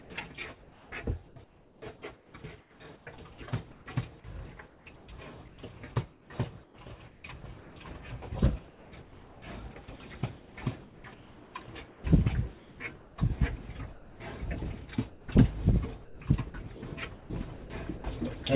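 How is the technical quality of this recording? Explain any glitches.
The recording has repeated background dropouts, passed through a narrowband call path with nothing above 4 kHz, which fits G.711 A-law at 64 kbps.

Comfort noise in place of the background appears in four stretches: 0.02 to 3.86 s, 4.68 to 7.76 s, 8.68 to 9.42 s and 10.38 to 14.2 s. Within them, 1.46 s, 1.04 s, 0.64 s and 1.66 s of the real background give way to a steady, featureless hiss. The likely cause is discontinuous transmission: the sender stops during pauses and the receiver synthesises noise roughly matching the background. Each pause is replaced by smooth filler as one block, which sets it apart from chopping.

Sound chopped by the voice detector occurs from 15.1 to 18.04 s, where 0.86 s in total is lost. The likely cause is the detector toggling between sending and muting more than once within this stretch, so quiet edges of the sound are cut and swapped for comfort noise. 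Unlike the background substitutions earlier, the sound itself has two or more holes here.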